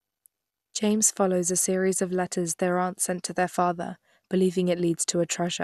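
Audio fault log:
throughout MP2 compression: dull, gurgling speech, nothing above 12.2 kHz, upper bands flickering granularly rather than cut cleanly as by a low-pass; likely Layer II coding near 80 kbps.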